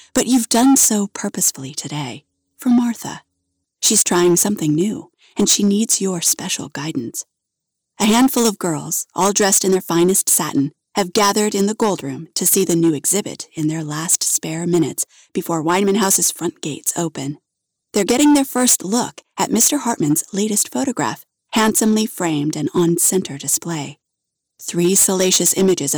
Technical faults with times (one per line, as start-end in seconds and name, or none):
0.00-25.97 hard clipping